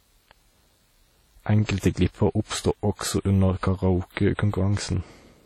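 Across the whole speech clip there is heavy codec damage, likely from WMA compression. The long transform blocks smear quantisation noise across tens of milliseconds, giving a ringing, washy tone and a hiss that swells and fades with the speech. That breathing hiss is what separates it from steady background noise. The damage fits a low bitrate near 32 kbps, and nothing remains above 19.4 kHz.

From 1.65 to 1.69 s, just before "glipper oppstod", there is pre-echo. A sharp onset falls late in a codec block, so noise sized for the loud attack spreads back about 34 ms into the quiet moment before it. A brief hiss runs ahead of the attack, which sounds blurred. Unlike a click or dropout, the hiss comes before the onset, not at it.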